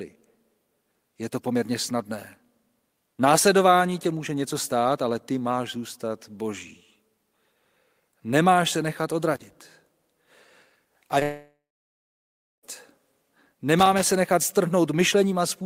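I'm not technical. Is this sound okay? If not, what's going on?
No. There are three kinds of problem in this speech recording.

Loose connector crackle: a worn or dirty plug or socket kept losing and regaining contact, chopping the signal. You hear an irregular scratchy crackle from 9.34 to 9.61 s, just after "se nechat", and again from 13.79 to 14.15 s.

Short concealed packet loss: a tiny slice of the call, about 20 milliseconds, arrived too late, so the receiver patched the gap by stretching the sound just before it. Around 11.19 to 11.23 s this gives a brief smear or wobble.

Long network dropout: immediately afterwards, from 11.23 to 12.65 s, the sound trails off as a fading buzz or hiss and then goes silent for about a second before the speech resumes. This was likely a stretch where no audio got through, so about 1.4 seconds are missing.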